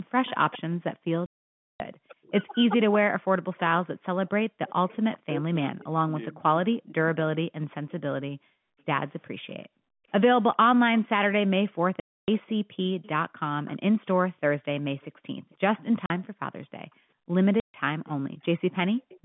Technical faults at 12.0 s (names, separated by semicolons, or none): echo leak; background gated by the echo canceller; packet loss filled with silence